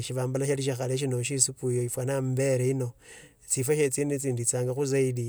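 Speech recording; no technical faults detected anywhere in the clip.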